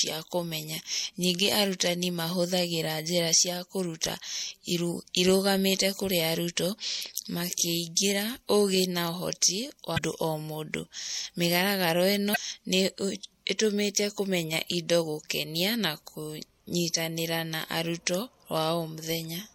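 A speech recording with plainly audible MP3 compression damage throughout. Sibilants take on a watery, swirly texture as weak frequency lines drop in and out from frame to frame. The cause is likely a low-bitrate MP3 encode, which fits roughly 64 kbps. On a spectrogram this shows as flickering holes and isolated blocks in the upper bands instead of smooth noise. Damaged data in the compressed stream adds two short glitches, from 9.94 to 9.99 s and from 12.32 to 12.37 s, each lasting about 45 ms. At those points the decoder misreads corrupted frames and has to hunt for the next valid header, so the sound blips. The spectrogram shows each one as a narrow vertical band of broadband or oddly tonal energy, and the waveform shows a brief burst or discontinuity that breaks the surrounding envelope.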